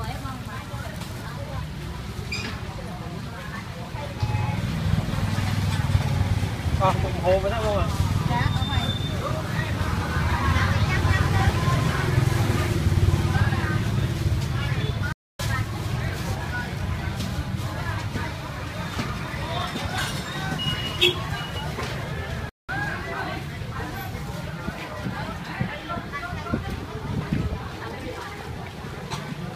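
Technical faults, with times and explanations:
15.12 to 15.40 s: playback stall, the audio cuts to silence for about 270 ms, likely because the player ran short of data.
22.49 to 22.69 s: playback stall, a shorter silent gap of about 190 ms in mid-flow.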